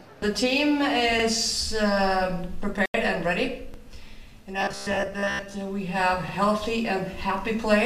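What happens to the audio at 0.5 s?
Nothing goes wrong at 0.5 s; the audio is intact there.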